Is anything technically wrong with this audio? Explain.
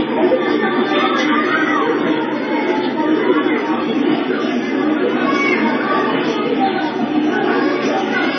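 Yes. Transcoding between lossy codecs runs throughout. Nothing is heard above 6.4 kHz, and two kinds of low-bitrate coding artefacts sit on top of each other. This likely comes from an MP3 encode re-encoded as Vorbis, both at very low bitrates, with the second codec wasting bits on the first codec's damage.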